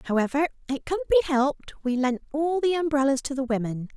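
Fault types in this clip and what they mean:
No technical faults can be heard in this speech recording; the signal stays steady and continuous throughout.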